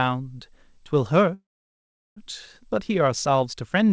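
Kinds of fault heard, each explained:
Call audio freeze: From 1.34 to 2.18 s the sound stops for about 0.83 s. A brief fading continuation of the last sound decays into roughly 0.74 s of silence, and then the audio resumes exactly where it halted. This is likely a jitter buffer running dry while packets were held up. Unlike a dropout, nothing is cut away. The gap is inserted, so everything after it arrives about 0.83 s late, still band-limited to 8 kHz by the call codec.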